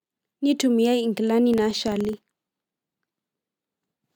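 From 1.54 to 3.11 s a ticking buzz at about 23 Hz tracks the speech level: filter restarted on every block, each starting from silence, which fits 2048-sample blocks.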